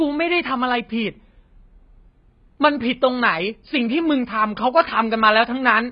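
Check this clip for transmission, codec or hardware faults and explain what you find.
The speech carries a codec fault across the whole clip. It is most likely AAC compression at a heavy setting: content stops sharply at 5 kHz, fitting a bitrate near 16 kbps, where the encoder discards high bands and coarsely quantises the rest. Sibilants sound dull and fizzy, vowels smeared and warbling. A spectrogram shows a flat ceiling at 5 kHz.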